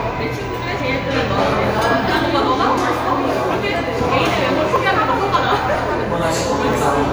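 From 0.8 s to about 6.74 s there are periodic USB or driver dropouts. Something blocks the audio path at a steady interval of 0.99 s. Each time, roughly 10 ms of sound is skipped, and the sound on either side is joined together. About seven of these cuts occur. They are heard as evenly spaced ticks or pops. They sound only where the sound itself is present.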